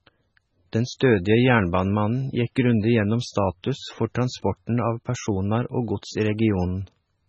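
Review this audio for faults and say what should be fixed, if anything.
Throughout, the speech sounds watery and swirly with nothing above 9.1 kHz, likely heavy MP3 compression near 16 kbps cutting treble and dropping weak frequency lines. Encode from the original at a much higher bitrate, or use a lossless format, to prevent it.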